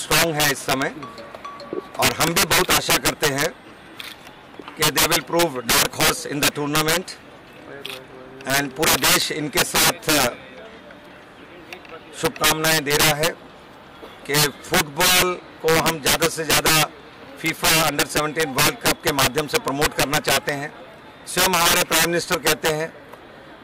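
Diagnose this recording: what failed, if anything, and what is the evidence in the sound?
Integer overflow in sample-format conversion: gain pushed peaks about 15 dB past full scale, and a few percent of samples wrap to opposite sign, cracking violently throughout.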